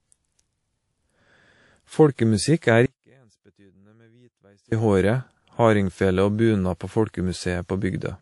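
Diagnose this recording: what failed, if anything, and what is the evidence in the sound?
Speech sounds dull and smeary throughout, with layered compression artefacts and nothing above 11.3 kHz. This is likely transcoding between lossy codecs at the codec stage, consistent with an MP3-then-WMA chain.

From 2.86 to 4.72 s, about 1.86 s, the speech abruptly drops to faint sound roughly 35 dB down. This is an audio dropout to a faint residue, likely signal loss while the downstream path stayed live.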